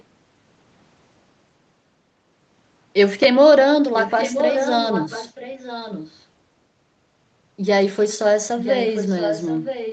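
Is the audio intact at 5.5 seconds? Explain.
No, an echo leak from 3.95 to 6.24 s adds a fairly loud copy of the speech about 0.97 s late, likely from incomplete echo cancellation, seen as repeated, time-shifted spectrogram patterns.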